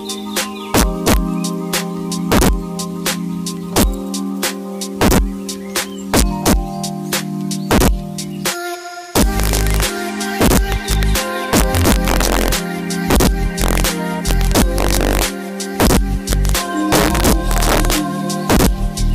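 Throughout the clip, the loudest moments break into hard, violent cracks rather than the softer flattening of ordinary clipping. This is integer overflow. The signal was pushed about 4 dB past the largest value the integer format can hold, and instead of being limited, each peak wrapped around to the opposite sign, jumping across the full range in one sample. Only a few percent of samples go over, so the cracks land on the peaks.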